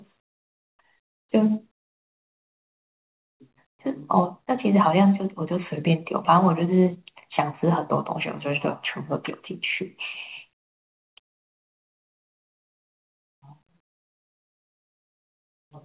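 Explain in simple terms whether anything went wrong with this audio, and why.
Nothing went wrong here: the speech came through an ordinary call connection that, like a regular phone line, simply leaves out sound above 4 kHz, which is just how that kind of line works.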